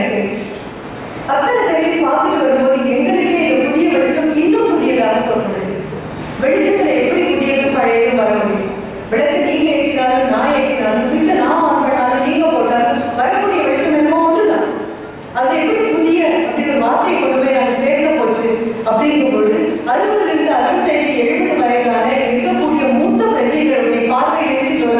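No technical faults can be heard anywhere in the recording. Nothing in it points to a problem with how the sound was captured, processed or delivered.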